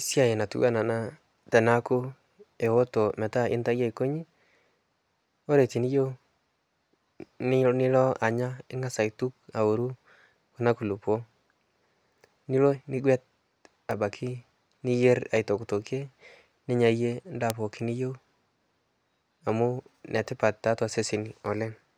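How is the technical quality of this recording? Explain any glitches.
Three isolated bit error spikes, at 2.66 s, 13.91 s and 17.50 s. Each is a flipped bit that throws one or two samples to a wrong value before they snap back. You hear a sharp, broadband tick unrelated to the speech, peaking around -24, -18 and -6 dBFS respectively.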